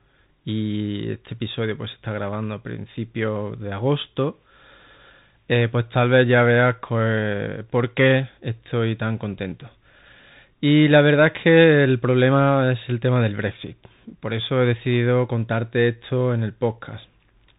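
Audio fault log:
throughout Bluetooth CVSD headset codec. Nothing above 3.8 kHz survives, so the speech sounds narrow and boxy. Each sample only steps up or down, which fits a 64 kbit/s stream. Loud high sounds outrun the step and distort. S sounds turn scratchy over a granular hiss.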